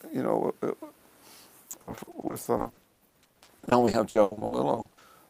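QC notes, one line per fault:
1.71–5.03 s, repeated packet loss (robotic sound): dozens of short dropouts, the longest 80 ms, each patched by repeating the preceding sound, covering about a third of the stretch. This creates choppy texture with pieces missing. The spectrogram shows smeared, frozen frames alternating with normal audio, and the waveform looks stuttered.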